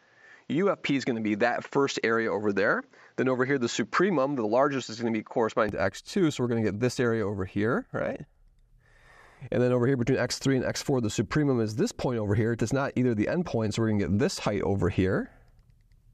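Input switched to a poorer device, from 0.0 to 5.69 s: the sound is band-limited, with nothing above 7.5 kHz, and carries a faint extra hiss well below it. At 5.69 s it opens up without gap or level jump, likely a return from a narrower-band input.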